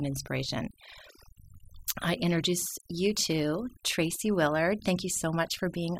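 Overdone noise removal runs through the whole recording. The denoiser was pushed too hard, cutting individual frequency bands whenever they sat near its noise estimate, so low-level parts of the speech were removed too. Pauses collapse to near silence with twinkling specks.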